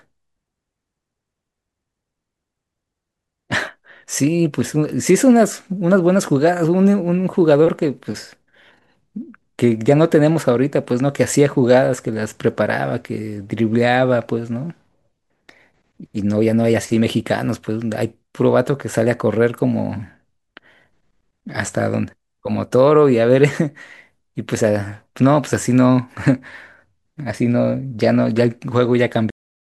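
At 29.30 s the speech has a cut-off end. The final stretch of audio was never written or played out. The sound stops mid-syllable and drops straight to digital silence, with no natural decay, for the remaining 0.36 s.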